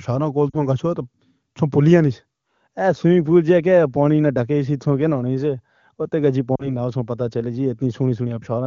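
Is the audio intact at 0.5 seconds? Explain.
No. From 0.50 to 0.57 s there are lost AMR speech frames: about 40 ms of audio failed to decode, which fits two consecutive 20 ms frames corrupted on the radio link. The wideband decoder concealed the gap by repeating the last good pitch and vocal tract parameters while ramping the gain down, so the sound briefly sags and drops to near silence. When decoding resumes, the speech comes back weak or rough for an instant.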